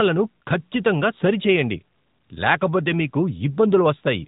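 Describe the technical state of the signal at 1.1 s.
At 1.1 s the speech is passing through the AMR narrowband mobile codec, which colours the whole clip rather than just this moment. Nothing above 3.8 kHz survives, and the voice is rebuilt from a vocal-tract model excited by a few pulses per subframe, giving a plainly audible buzzy, synthetic edge that fits a rate of about 10.2 kbps. A simple telephone-band filter would cut the same highs but leave the remaining voice natural, without this reconstructed texture.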